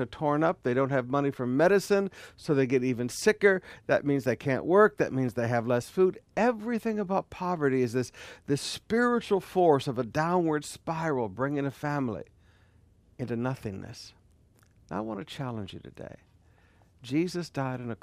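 Nothing in this speech recording points to a technical fault at any point in the signal.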